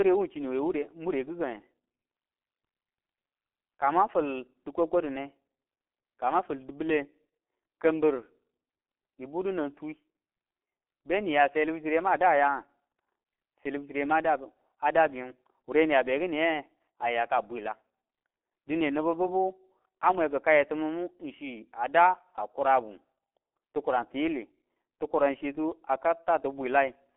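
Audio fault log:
throughout G.723.1 codec. The speech is muffled, with nothing above 3.8 kHz and a narrow telephone band of about 250 Hz to 3.4 kHz. It sounds hoarse, and consonants smear together. The coarse, slowly updated voice model fits a bitrate near 6 kbit/s. Damage is heavy.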